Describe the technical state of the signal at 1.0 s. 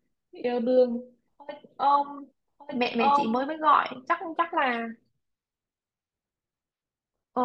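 At 1.0 s a doubled audio track is running, from the start to 3.44 s: an equally loud copy trails by about a second, likely a second capture path, clean and undecayed, unlike echo.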